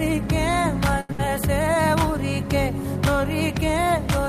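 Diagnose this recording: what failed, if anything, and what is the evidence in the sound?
The network stage failed, first as a short stall from a late packet. From 1.00 to 1.10 s, the sound holds and stretches for about 87 ms with a slight buzzy smear, then continues from exactly where it stopped. A packet arrived late, the jitter buffer ran dry, and the receiver extended the last audio until it came. This differs from a loss because nothing is skipped. The playout simply runs 87 ms later afterwards.

Right after, from 1.12 to 1.20 s, a burst of packet loss follows. The receiver conceals the gap with about 65 ms of held, fading continuation. Then the sound resumes further along, with roughly 70 ms of content gone. Unlike the stall just before it, this concealment does not pick up where it left off. There is a jump in the material, which shows these packets never arrived in time to be played at all.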